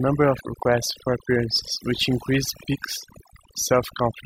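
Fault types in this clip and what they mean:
overdone noise removal: the noise reduction was pushed too hard across the whole speech clip, so bands sitting near the noise estimate get switched off. Background drops and breaks up into little twinkling specks, and quieter parts of the voice vanish too.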